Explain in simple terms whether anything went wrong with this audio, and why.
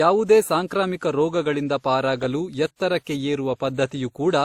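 Throughout the speech, two different sets of compression artefacts are layered on top of each other, which points to transcoding between lossy codecs, likely a WMA-style encode later re-encoded as Opus. Unlike a single compression pass, the artefacts of both encodes are heard together. Treble still extends to about 20.2 kHz.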